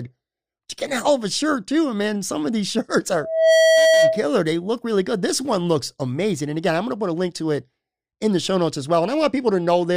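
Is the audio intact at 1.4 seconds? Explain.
Yes, the audio is intact at 1.4 seconds, with no fault to be heard at that moment.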